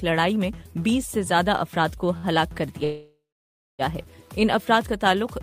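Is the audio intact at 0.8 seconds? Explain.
Yes, the audio is intact at 0.8 seconds, with no dropout, glitch or other fault at that moment.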